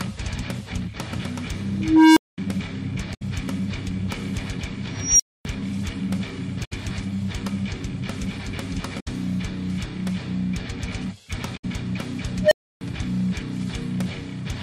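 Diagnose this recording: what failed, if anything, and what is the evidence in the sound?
An unstable filter in the processing chain fails three times. A low tone around 300 Hz swells over 0.43 s from 1.73 to 2.38 s, a high tone near 5 kHz builds in 0.23 s from 4.97 to 5.45 s, and a tone around 700 Hz rises in 0.09 s from 12.43 to 12.81 s. Each clips, then drops into silence of about 0.21, 0.26 and 0.30 s while the overflowed recursive filter resets. That runaway followed by a dead gap separates it from acoustic feedback, which keeps howling.

Damaged data in a compressed stream, at the codec or storage stage, produces a brief disturbance from 6.61 to 6.73 s. The decoder misread or refused corrupted frames, lost sync and jumped to the next frame header. The loss of frame sync distinguishes it from a clean dropout.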